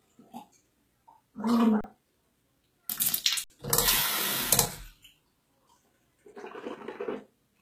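Throughout, the treble is gritty and metallic, with nothing above 14.9 kHz, most likely from HE-AAC compression at a bitrate around 20 kbps. The upper band is rebuilt by copying lower bands upward, so its harmonics don't line up with the real ones below.

At 1.81 to 1.84 s, and again at 3.44 to 3.50 s, the output buffer ran dry in an underrun with held sample. The converter froze on its last value, so the sound flatlines for 33 ms and then 60 ms. About 30 ms and 70 ms of audio were lost in these gaps.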